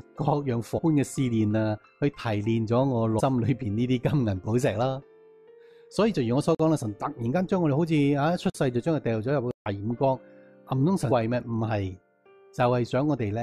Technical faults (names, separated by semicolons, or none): damaged data in a compressed stream; block of digital silence